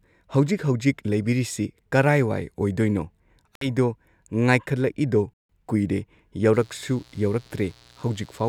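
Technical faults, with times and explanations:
3.55 to 3.67 s and 5.34 to 5.49 s, Bluetooth stall: the speech drops abruptly to silence, for about 60 ms in the first gap and about 160 ms in the second, then resumes. The likely cause is radio interference delaying packets on a wireless link, so the headphones' small playback buffer emptied and output halted until the resent audio arrived. The sound carries on from where it broke off.
6.53 to 8.48 s, mains buzz: a steady, raspy buzz enters under the speech and stays to the end, sitting roughly 30 dB below it. Its fundamental is 60 Hz, pointing to a 60 Hz supply. The rasp comes from sharp switching spikes, such as those from a dimmer, a rectifier or an unshielded lead, entering the signal twice per mains cycle and spreading energy across harmonics up into the kilohertz range.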